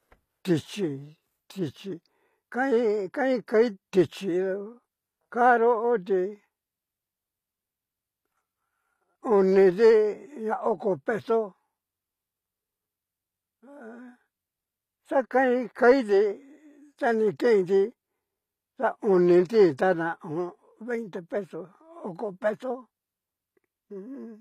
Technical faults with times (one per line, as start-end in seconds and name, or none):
0.00-24.41 HE-AAC compression